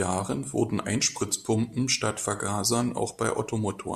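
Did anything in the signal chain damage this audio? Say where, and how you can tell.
No, nothing in the signal chain damaged this audio.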